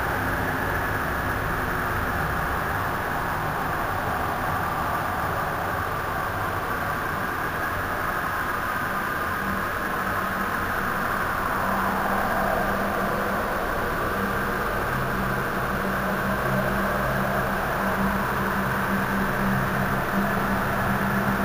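From start to finish, the sound carries imaging from sample-and-hold upsampling. The band between 8 and 16 kHz holds a mirrored copy of the content below 8 kHz, about 19 dB under the signal, which fits material at 16 kHz raised to 44.1 kHz by holding each sample with no smoothing filter. It gives a metallic fizz that rises and falls with the sound. Unlike steady hiss, this fizz moves downward as the pitch rises.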